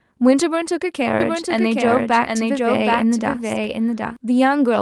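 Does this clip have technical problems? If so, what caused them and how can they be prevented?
Yes. From 1.20 to 4.17 s the speech has a doubled audio track: a dry, full-band copy trails about 0.7 s behind, a few decibels quieter, switching on and off abruptly. It's likely a second, slower capture path mixed in. Prevent it by routing only one input.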